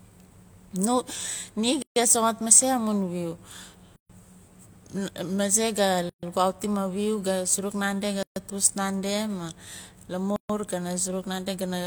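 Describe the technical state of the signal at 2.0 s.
Right around there you're just past a gap at a join of encoded pieces: the speech drops to silence from 1.82 to 1.96 s, about 138 ms, then resumes where it left off. Separately encoded chunks were butted together untrimmed, so start delay and end padding stay in. It recurs every 2.0 s.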